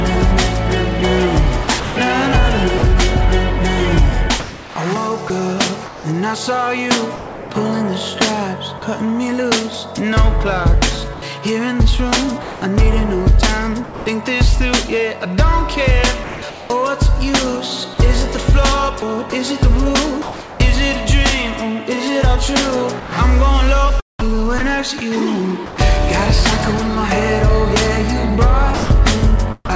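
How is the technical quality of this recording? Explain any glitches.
The recording is rough: the sound keeps breaking up, with stretches swapped for synthetic hiss. The band-limited call sound, with nothing above 8 kHz, fits a G.722 link.

Sound chopped by the voice detector occurs at 1.64–2.82 s, 4.40–8.82 s, 11.14–14.06 s, 19.00–20.60 s, 23.00–25.78 s and 28.74–29.69 s. The sender's detector likely kept toggling, so quieter bits flicker into fake noise and sound choppy.

Sound dropped by the voice detector comes at 16.24–16.42 s. The detector likely mistook the sound for background and stopped sending, so 180 ms vanishes under steady noise.

Comfort noise in place of the background runs 16.24–16.70 s. With transmission likely paused, the receiver filled the gap with flat, featureless hiss, replacing the real background's texture for 380 ms.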